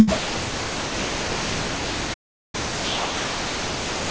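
From 0.16 s to the end, the speech gives way to steady, hiss-like background noise and never returns, most likely sound dropped by the voice detector, with comfort noise played in its place. From 2.13 to 2.55 s, even that noise stops dead for about 0.4 s before resuming: a playback stall, where the player likely starved of data and output silence until it recovered. The noise stays band-limited, with nothing above 8 kHz, as expected from the G.722 call path.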